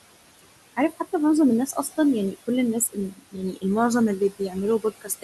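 Throughout, the room noise, sitting about 14 dB below the speech, dips between phrases and swells under them: noise suppressor artifacts from roughly 20 dB of frame-by-frame cutting. Speech cut by the noise suppressor follows at 1.67 to 1.9 s, 2.85 to 3.64 s, 4.19 to 4.55 s and 4.8 s to the end. Parts of the speech go faint or swallowed, dropping by up to about 13, 22, 12 and 20 dB, because the suppressor mistook them for noise.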